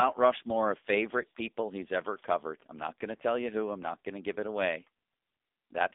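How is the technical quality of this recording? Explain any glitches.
The quality is poor throughout, with speech that sounds thin, boxed-in and buzzy for the whole clip. This is heavy damage from the AMR narrowband mobile codec. Everything above 3.7 kHz and below about 250 Hz is gone, leaving a telephone-band voice. The raspy, synthetic texture comes from the codec rebuilding speech from a vocal-tract model fed with sparse pulses. That roughness fits a low AMR-NB mode of around 6.7 kbps.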